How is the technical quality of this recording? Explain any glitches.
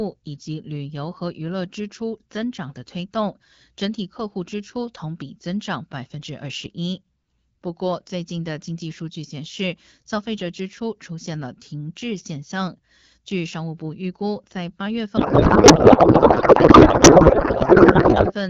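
There's one real glitch, near the end. The audio up to that point has the slightly band-limited sound of AMR wideband (HD Voice) coding, with the light codec texture you'd expect from a rate around 12.65 kbit/s.

From 15.17 to 18.34 s there's a codec payload misread. The decoder appears to be unpacking the AMR frames with the wrong bit layout, which fits octet-aligned packets being read as bandwidth-efficient. The speech turns into garbled, warbling noise that barely tracks it.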